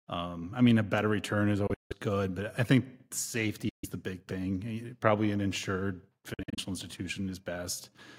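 A speech recording broken by three abrupt holes where the sound cuts to silence and then resumes as if it had played on underneath. The first runs from 1.67 to 1.93 s, after "a better return is", and the longest gap is about 160 ms. The second, from 3.69 to 3.85 s just before "the big", loses about 140 ms of sound. The third, 6.34 to 6.59 s after "probably an insured", is choppier, broken into short bits of silence no longer than about 46 ms. These are likely Bluetooth dropouts, where audio packets reached the headphones too late and were discarded.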